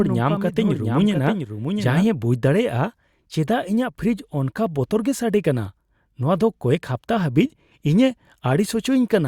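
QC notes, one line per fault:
0.00–2.06 s, doubled audio track: a second full-band copy of the speech trails by about 0.7 s, a few dB quieter, already running as the clip opens and then cutting off abruptly. No decay or room colour, so likely a second capture path or out-of-step edit.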